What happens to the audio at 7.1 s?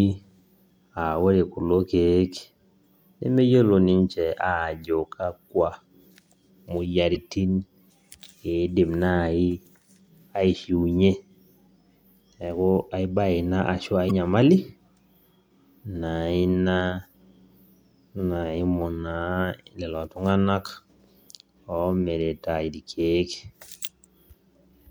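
Right around 7.12 to 7.17 s there's damaged data in the compressed stream. The decoder hits frames it can't read properly, loses sync and hunts for the next valid frame header, so you get a quick glitch lasting about 45 ms.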